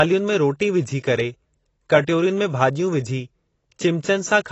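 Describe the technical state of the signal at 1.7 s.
At 1.7 s the speech carries plainly audible damage of the kind AAC compression leaves, and it runs through the whole clip. Nothing sounds above 8 kHz, so the top end is dull. The encoder has likely squeezed the signal into a low bitrate, which fits roughly 24 kbps AAC-LC. It quantises each frame's frequency lines coarsely, leaving holes in the spectrum or filling bands with substitute noise. Detail is smeared, and sibilants and held sounds take on a fizzy, warbling texture.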